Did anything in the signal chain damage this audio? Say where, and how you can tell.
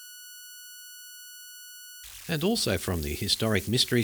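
Yes. A whistle around 1.5 kHz and a grainy texture sit under the speech throughout, about 18 dB below the signal. These are converter idle tones: an undithered delta-sigma converter falls into repeating bit patterns at low input levels, producing offset-dependent tones.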